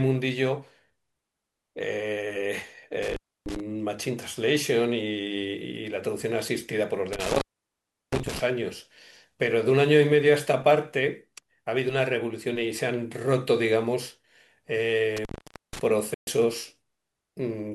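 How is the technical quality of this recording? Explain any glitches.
The recording has two kinds of fault: three brief cut-outs from an intermittent contact, and one short digital broadcast dropout near the end.

Intermittent contact occurs at 3.02–3.60 s, 7.13–8.39 s and 15.17–15.81 s. A loose plug or cable conductor momentarily loses contact, so the speech breaks off for about 0.30 s, 0.71 s and 0.48 s respectively. Each break is bracketed by crackle as the contact scrapes open and closed. Faint hiss remains while the line is open.

The digital broadcast dropout falls at 16.14–16.28 s. The receiver stopped getting valid data and muted until good frames resumed. The speech fades out over about 3 ms and stays silent for 128 ms, which fits a loss of four frames. Whatever was transmitted in that gap is gone, and the audio returns afterwards.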